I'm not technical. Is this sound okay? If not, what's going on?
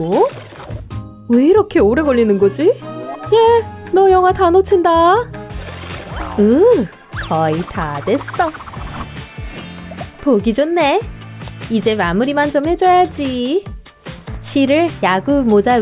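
Yes, the sound is technically in good shape, with nothing going wrong in how it was recorded or played back.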